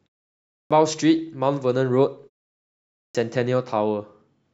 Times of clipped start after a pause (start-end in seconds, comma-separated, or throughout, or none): 0.51-0.71, 2.96-3.15